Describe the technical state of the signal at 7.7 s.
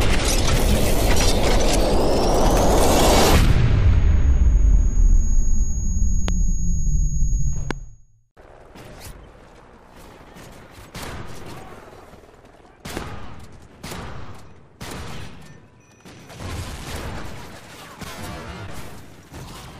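At 7.71 to 7.73 s there is a single loud pop, peaking about 15 dB above the surrounding signal. It is most likely a sudden voltage step or pulse from a plug, switch, static discharge or driver glitch. It sounds as a sharp thump, with the audio continuing underneath.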